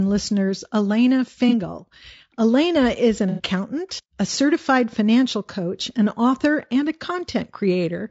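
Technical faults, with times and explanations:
Throughout: low-delay AAC compression. The speech sounds rough and grainy, with noise sitting between the harmonics and a top band that feels thin and synthetic. The likely cause is the low-delay AAC coding used for video calls. Its very short frames cannot separate closely spaced pitch harmonics well, so bits are spent inefficiently and quantisation noise leaks between them. The damage is plainly audible and fits a bitrate around 32 kbps.
1.49–1.54 s and 3.29–3.43 s: AAC frame loss with concealment. Each gap comes across as a brief smeared, noisy, phasey patch rather than a clean dropout. The first lasts about 30 ms and the second about 90 ms, which points to one and three missing frames respectively. The decoder has patched each hole by reusing the last good spectrum with scrambled signs or interpolated energy.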